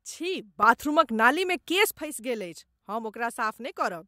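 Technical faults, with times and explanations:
0.63 to 1.95 s, sudden gain jump: the level leaps up by about 9 dB from one sample to the next at 0.63 s, holds there, and drops back just as abruptly at 1.95 s. The speech and the background noise rise and fall together, so the whole signal was scaled, not just the talker. The likely cause is a digital gain setting or bit shift applied instantly instead of being ramped in and out.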